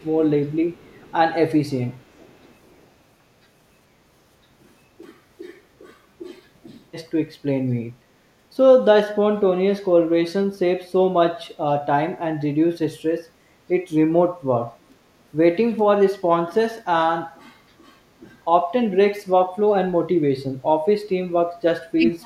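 Right at the start, from 0.0 to 0.19 s, then 0.74 to 1.14 s and 2.43 to 2.52 s, there's a faint echo leak: a delayed copy of the speech trailing about 440 ms behind, sitting very low, around 35 to 40 dB down. That's likely a far-end loudspeaker whose echo canceller didn't fully scrub it.

Then at the very end, 21.95 to 22.25 s, the talker's speech drops out hard, a very deep cut over roughly 300 ms. It sounds like speech suppressed in double talk, likely the canceller mistaking overlapping talk for echo and ducking everything.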